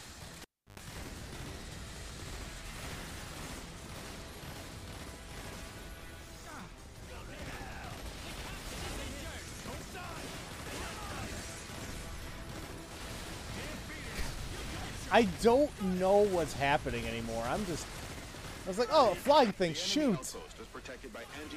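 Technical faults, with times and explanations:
0.42–0.80 s, cable pulled and plugged in: a pop as the lead comes out, 330 ms of near silence, 100 ms of 50 Hz buzz while only the tip touches, then a second pop. Waveform: two spikes around a flat gap. Spectrogram: stacked 50 Hz harmonic lines.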